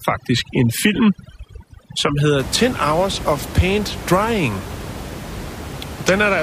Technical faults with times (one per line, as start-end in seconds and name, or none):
0.00-2.40 overdone noise removal